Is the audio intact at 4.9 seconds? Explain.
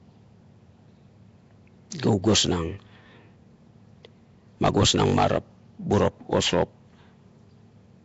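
No. At 4.9 seconds the speech carries the same damage heard through the whole clip. It has a rough, hissy halo and a smeared, underwater quality. Nothing sounds above about 7.7 kHz. The likely cause is Nellymoser compression, the Flash-era Nellymoser Asao codec, at a rate that fits about 32 kbps. It gives each short block a fixed, small bit budget. Weaker bands get no bits and are filled with noise, which smears the detail.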